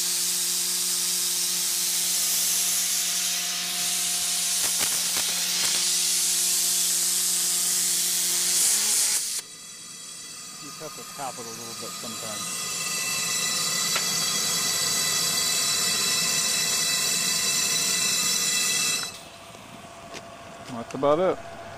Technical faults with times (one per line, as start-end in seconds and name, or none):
4.58-5.81 cable scratch noise